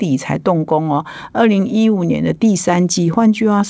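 Nothing in the speech goes wrong at any point, and the top end simply stops at about 8 kHz, which is what you'd expect from a wideband call link like G.722 at 64 kbps.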